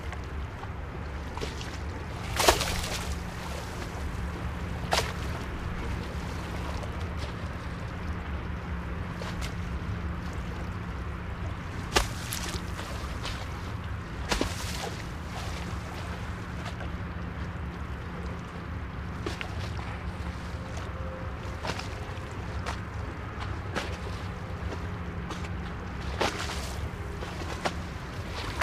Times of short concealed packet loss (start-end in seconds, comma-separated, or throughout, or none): none